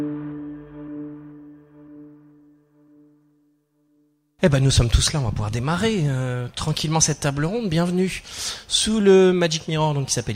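No technical faults can be heard anywhere in the recording.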